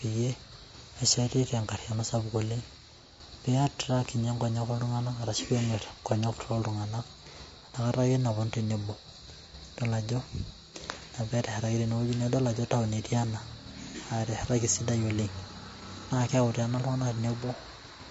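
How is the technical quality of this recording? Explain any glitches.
The quality is noticeably compromised, with constant codec damage and one brief glitch.

All the way through, the speech sounds rough and grainy, with noise filling the gaps between harmonics and a thin, somewhat synthetic top end. That's likely low-delay AAC compression (AAC-ELD), whose short frames resolve pitch poorly and spend bits fast. The damage fits a rate of around 32 kbps.

Around 13.91 to 13.96 s there's a short smeared, phasey patch. That's AAC frame loss with concealment: the decoder lost what sounds like a single frame and patched the gap by reusing the last good spectrum with scrambled detail, so about 50 ms comes out noisy instead of clean.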